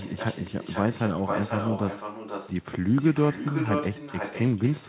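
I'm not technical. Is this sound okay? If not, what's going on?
No. All the way through, each bit of speech returns about half a second later as a fainter, hollow copy: echo with no canceller, from the other end's loudspeaker feeding its microphone.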